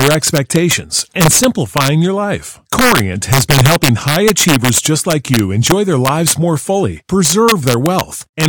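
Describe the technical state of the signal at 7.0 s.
At 7.0 s the speech is still affected by integer overflow, present throughout the clip: the signal is driven about 4 dB past the integer ceiling, and instead of limiting, the loudest peaks (under one percent of samples) wrap to the opposite sign, giving harsh, sudden cracks much sharper than clipping.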